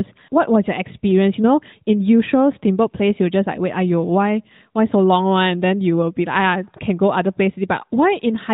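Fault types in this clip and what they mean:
No fault types are present in this clip, so there is nothing here to explain.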